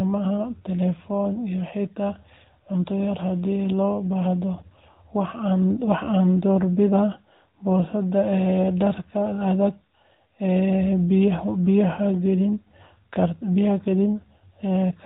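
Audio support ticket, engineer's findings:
AMR narrowband mobile codec damage, throughout the speech. Symptom: muffled, band-limited, plainly buzzy and synthetic tone. Spectrogram: hard ceiling at 4 kHz, nothing above, consistent with 8 kHz sampling. Harmonics smeared, formants blocky in 20 ms steps. Component: AMR-NB encoder, coarseness fits a mid mode around 10 kbps. Mechanism: vocal-tract model excited by sparse pulses per 5 ms subframe, so fine harmonic detail is lost.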